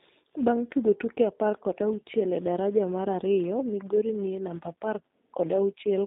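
Throughout the speech, a filter restarted on every block resets to silence at each block boundary, leaving a 200 Hz buzz of transients whose loudness follows the speech level. The G.729 codec runs the whole way too. Its 8 kbit/s coding confines the sound to about 200 Hz to 3.7 kHz and leaves plainly audible roughness and a synthetic edge.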